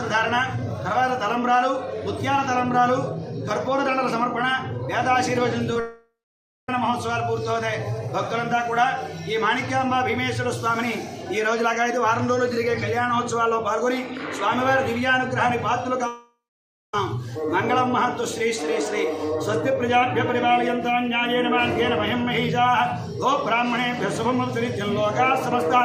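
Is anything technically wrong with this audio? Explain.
Yes, there are three transmission faults.

A short concealed packet loss occurs at 5.73 to 5.76 s. About 20 ms of audio failed to reach the decoder in time, so the receiver patched the gap by extending the preceding sound and then blending back into the real signal. It is heard as a tiny smear or wobble.

Two long network dropouts follow, at 5.80 to 6.69 s and at 16.07 to 16.94 s. Each is a gap of roughly 0.86 to 0.88 s where no real audio plays. It opens with a fading buzz or hiss as the last sound is stretched, then about 0.57 to 0.58 s of near-silence, before the audio resumes further on without the missing part. This was likely caused by the stream stalling on the network for almost a second each time.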